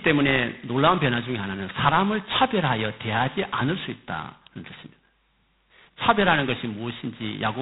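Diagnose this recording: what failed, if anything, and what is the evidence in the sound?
Codec stage: G.726 ADPCM throughout, with nothing above 3.9 kHz and a rasping hiss riding the speech level, which fits coarse 16 kbit/s difference coding.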